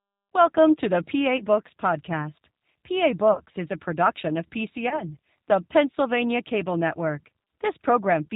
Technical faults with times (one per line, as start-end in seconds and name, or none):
0.00-8.36 G.729 codec
1.37-1.43 VoIP packet loss concealed by the speech codec
3.33-3.41 VoIP packet loss concealed by the speech codec
4.89-5.03 VoIP packet loss concealed by the speech codec